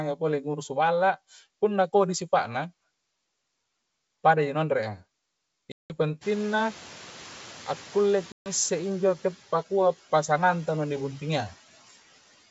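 From 5.72 to 5.93 s there is packet loss on the ADPCM call: a hard-edged gap of about 180 ms, which points to roughly ten consecutive packets going missing and being filled with silence. Because ADPCM codes each sample as a difference from an adaptive prediction, the receiving decoder's predictor and step size drift away from the sender's during the gap. Speech therefore resumes slightly distorted, until the two sides converge again a few tens of milliseconds later.

Around 6 s the room noise jumps by about 21 dB, settling roughly 22 dB below the speech. From 6.21 to 8.89 s the noise suppressor is catching up. Its noise estimate still reflects the quieter floor, so the louder noise initially passes with little attenuation. Over about 2.7 s the estimate adapts, and the noise sinks by about 5 dB as suppression takes hold.

Within that interval, from 8.32 to 8.50 s, a second burst of packet loss on the ADPCM call leaves a 140 ms hole, consistent with around seven lost packets. 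The same predictor mismatch follows, with a short stretch of distorted speech before recovery. The wideband band-limit and faint upper-band hiss are consistent with G.722 at its 64 kbit/s rate.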